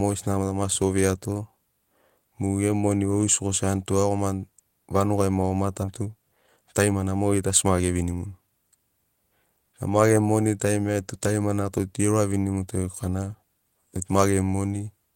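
A speech recording with two timing faults. At 5.83 to 5.85 s there is a skip ahead. Roughly a second of audio is missing, and the two sides are butted together with no fill. This happens when a stretch is dropped in transit or discarded by an overflowing jitter buffer while later audio was already queued. From 6.01 to 8.48 s a jitter buffer speed-up follows. The buffer held more than its target delay, so the receiver repeatedly trimmed pitch-period-sized pieces. Playback runs at about 115% with unchanged pitch, sounding hurried, and around 0.4 s is removed in total.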